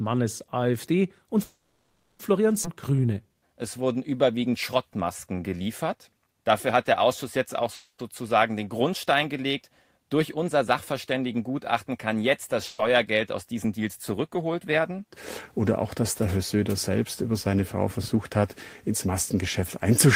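At 1.43 s there is a call audio freeze, likely caused by packets being held up in transit until the jitter buffer ran dry. The receiver extends the last sound as a fading buzz or hiss, which trails into about 320 ms of silence before the audio resumes at 2.22 s. Nothing is lost. Instead, a 760 ms gap is inserted, and the call falls that much further behind.

At 2.63 s a skip ahead follows, as the receiver discards a stretch of queued audio to recover that delay. Roughly four tenths of a second is gone. The two sides are joined with only about 10 ms of fill, so the sound jumps abruptly forward with almost no break.

From 2.90 s to 6.34 s the jitter buffer slow-down sets in. With its reserve running low, the buffer repeats single pitch periods and short pieces of pauses again and again, adding 348 ms in total. Playback runs at about 90% speed at unchanged pitch, so sounds are drawn out and may carry a faint warble.

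A second call audio freeze comes at 7.75 s, right after "jetzt auch", likely from another delay in packet arrival. The last sound is stretched and fades, with about 90 ms of silence, before the audio continues intact at 8.02 s. This adds 240 ms of gap.

At 12.67 s, just after "kann jetzt das", a burst of packet loss occurs: consecutive packets never arrive in time. The receiver covers 120 ms by continuing the last sound at decreasing level, heard as a held buzz or fading hiss, then resumes at 12.82 s with 120 ms of the audio missing.

From 13.57 s to 20.06 s the jitter buffer speed-up is working to shed excess delay. The buffer holds more than its target, so it cuts out short pieces of one or a few pitch periods many times over, removing roughly four tenths of a second. The audio plays at about 106% speed at the same pitch, sounding slightly hurried.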